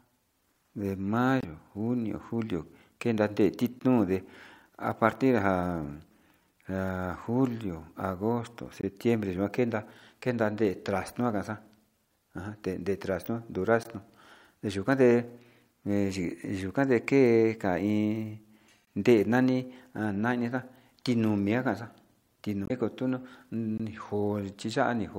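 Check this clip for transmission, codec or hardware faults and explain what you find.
Two transmission faults affect this speech recording.

Damaged data in a compressed stream, at 1.38–1.45 s and 22.65–22.71 s: brief chirps, squawks, clicks or short holes as the decoder misreads corrupted frames and loses sync.

Gap between chunks, at 3.79, 8.81, 13.83, 18.85 and 23.78 s: 20 ms silences every 5 s, where consecutive chunks meet without being joined seamlessly.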